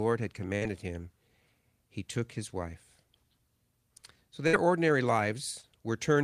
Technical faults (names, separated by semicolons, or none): burst of packet loss; short concealed packet loss